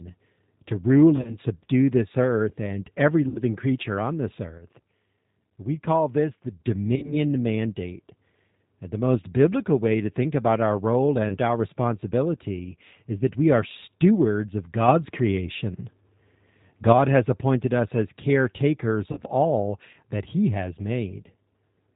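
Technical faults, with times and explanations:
Throughout: G.729 codec. The speech was carried by G.729A at 8 kbit/s. The codec rebuilds each 10 ms frame from a vocal-tract filter, a pitch predictor and a handful of pulses, and discards everything above 4 kHz. The result is plainly audible: a dull, band-limited voice with a rough, slightly synthetic edge, and consonants that lose their crispness.
1.16–1.36 s, 3.29–3.42 s, 6.96–7.16 s, 11.29–11.38 s and 19.12–19.22 s: VoIP packet loss concealed by the speech codec. Packets went missing, and the decoder filled each gap by extrapolating its last pitch and filter settings while lowering the gain. The voice smears into a buzzy tone or a coloured noise that fades. Between "to rule" and "subdue this", 80 ms went missing in short bursts spread over 120 ms, with the longest run 30 ms. The gap at 3.29 s is 60 ms. The one at 6.96 s is 50 ms spread over 80 ms. 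The one at 11.29 s is 20 ms. Between "appointed us as caretakers" and "all that", 50 ms is lost. Because each frame builds on the previous one, the voice stays weak and distorted for a short while after each gap.
4.57–6.61 s and 14.88–16.93 s: sudden gain jump. Most likely a digital gain change was applied without a ramp. Just after "creature on this", the voice and background noise drop together by about 6 dB and stay lower until 6.61 s. From 14.88 s they rise by about 6 dB, holding at the higher level until 16.93 s. Each step lands abruptly rather than as a smooth fade.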